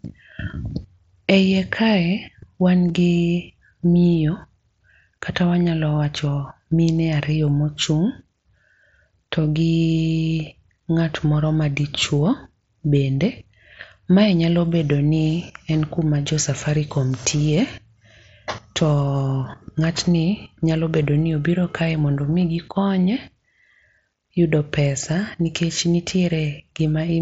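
At 2.88 s there is a brief concealed Bluetooth headset packet loss. About 15 ms of speech never arrived, which points to a couple of dropped headset packets. The receiver filled the gap by repeating a closely matching recent stretch of waveform. The mSBC headset codec adds a light grain on loud sounds.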